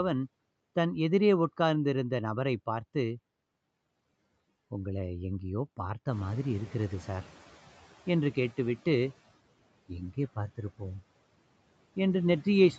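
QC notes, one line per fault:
6.11–7.51 s, noise suppressor catching up. The room noise jumps by about 14 dB at roughly 6 s. The suppressor's noise estimate lags, so the new noise passes with less reduction at first. Over 1.4 s it adapts, and the noise sinks by about 8 dB.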